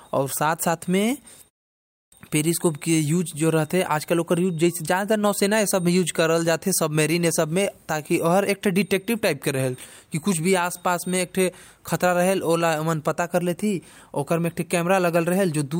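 The output device dropped into a low-power state during a 0.33 s pause and needed time to wake, a clipped start after a pause: from 1.75 s to 2.12 s, about 370 ms of speech is swallowed, so the next phrase bursts abruptly out of silence without its opening sounds.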